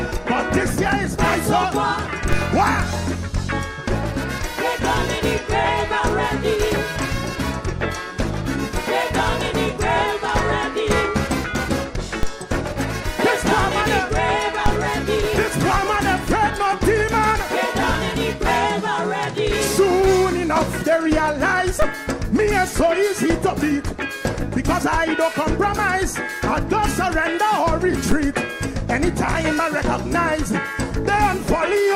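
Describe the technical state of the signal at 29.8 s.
At 29.8 s the signal is intact, with no dropout, click, distortion or other fault audible at that moment.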